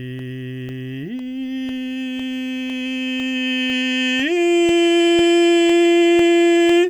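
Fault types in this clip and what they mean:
Periodic USB or driver dropouts: something in the background is stalling the USB bus or audio driver on a timer, so every half second a sliver of the music, around a millisecond, gets swapped for silence. You hear it as a steady tick riding along with the music from about 0.19 s to 6.70 s, roughly fifteen of them, evenly spaced like a metronome, which is the giveaway that it's scheduled interference.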